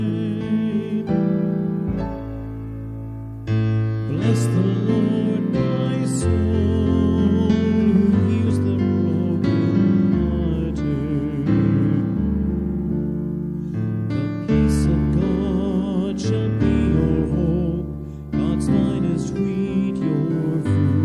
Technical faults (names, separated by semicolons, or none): none